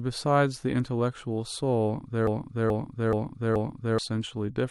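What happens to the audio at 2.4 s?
At 2.4 s the speech is caught in a broken-record loop running from 2.27 to 3.98 s. A 0.43 s fragment plays four times back to back, identical each pass. This likely comes from the player or stream stalling and resending the last piece it held, so the speech meant for that stretch is lost. Unlike an echo, nothing fades, and unlike a stutter, the repeats are long, regular and exact.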